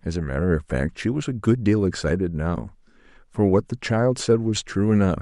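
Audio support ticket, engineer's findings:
Short squeak/blip at 3.89 s, low level, around -30 dBFS. Corrupt frame decoded: flipped bits in one compressed speech frame misplaced spectral energy; decoder played it regardless.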